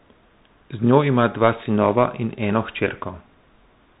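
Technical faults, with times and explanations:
Throughout, Bluetooth CVSD headset codec: nothing above 3.8 kHz, with granular hiss and scratchy s sounds from one-bit step coding, unlike a clean low-pass cut, consistent with 64 kbps CVSD.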